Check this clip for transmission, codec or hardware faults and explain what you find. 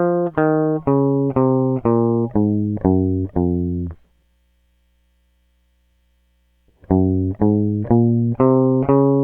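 No faults turn up anywhere in this music clip.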